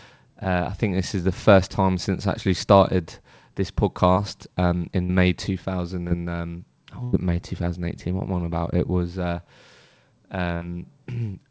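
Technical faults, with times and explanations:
4.13–4.19 s and 6.08–6.14 s, short concealed packet loss: Two brief smears. The first comes right after "I actually started this", and the second just before "um oh". Each time, about 30 ms of audio didn't arrive in time, and the receiver covered the hole by stretching the last sound for about 30 ms before blending back into the real signal. That quick patch is why you hear a brief wobble rather than a gap.
5.03–5.12 s, 7.04–7.16 s and 10.55–10.64 s, burst of packet loss: Three longer dropouts, with the middle one coming just after "um oh". The receiver kept extending the last sound and let it fade, for about 60 ms, 90 ms and 60 ms in turn. That fade is what gives the held buzz or dying hiss. When the audio picks up again, it's further along, because roughly the same length of the original sound is simply gone.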